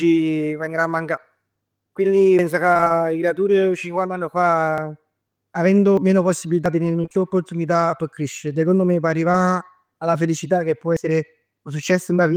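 A speech clip with audible skips at 2.39, 4.78, 5.97, 6.66 and 10.97 s, where the sound jumps ahead with no silence, losing roughly a tenth of a second at 2.39 and 10.97 s, a few hundredths at 4.78 and 6.66 s, and about 150 ms at 5.97 s. These are likely dropped buffers (overrun), with audio overwritten before it was read. From 2.73 to 3.00 s and 7.02 to 7.20 s the sound turns choppy and robotic. This is repeated packet loss: five and then four brief holes, none longer than about 23 ms, were each patched by extending the preceding sound, so nearly half of each stretch is filler. At 9.31 to 9.35 s a brief smear marks short concealed packet loss, where about 20 ms that arrived too late was filled in from the sound just before it.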